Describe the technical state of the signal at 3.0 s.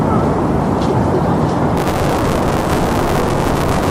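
At 3.0 s the signal is in the middle of buffer tearing, which runs from 1.77 s to the end of the clip. The writing program and the playback hardware have drifted out of step around the ring buffer and now cross inside every period, so a bit under half of each buffer replays audio from about 20 ms earlier, with hard joins at both edges. The result is a steady robotic buzz at 188 Hz, which fits a 256-sample buffer.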